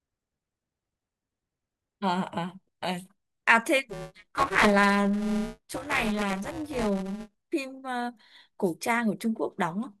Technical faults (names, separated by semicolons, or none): buffer tearing